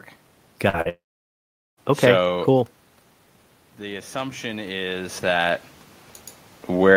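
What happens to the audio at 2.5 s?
The audio is intact at around 2.5 s; the only change there is the talker's level shifting as they move relative to the microphone, which is not a fault.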